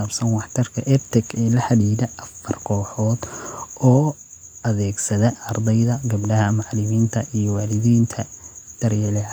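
No technical faults are audible in this recording.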